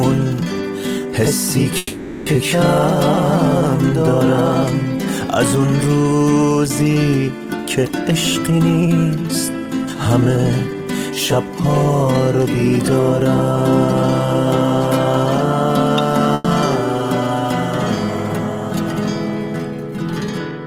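From 1.77 to 2.28 s a call audio freeze holds the last sound as a fading buzz or hiss for about 490 ms, likely because delayed packets emptied the jitter buffer; the audio then resumes where it stopped, later but complete. A shorter 100 ms freeze recurs at 16.34 to 16.46 s. Jitter buffer speed-up follows the backlog: 8.12 to 11.53 s runs at 109% with about 0.3 s trimmed, 12.05 to 13.00 s at 105%, and 20.21 to 20.66 s at 107%. Pitch-period cuts make the sound hurried at unchanged pitch.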